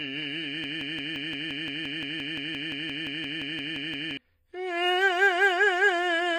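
From the very start, the music has that smeary, layered lossy sound you get from transcoding between lossy codecs. Nothing comes through above 15.2 kHz, and on top of that band limit there's a mix of different artefacts heard together that don't come from any single encoder. It's likely the result of going through two or three low-bitrate codecs in a row, with each pass re-encoding the previous one's damage and adding its own, while the lowest cut-off stuck.

Then from 0.64 s to 4.17 s there's a broken-record loop: a 0.17 s fragment of the music repeats back to back, about twenty times, so you get a stuttering, machine-gun chatter for roughly three and a half seconds. Whatever should have played in that stretch is simply gone. The likely cause is a stall in the player, encoder or stream, which kept re-sending the last chunk it had buffered until things got moving again.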